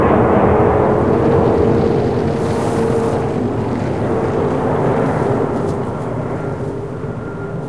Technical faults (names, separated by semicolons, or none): none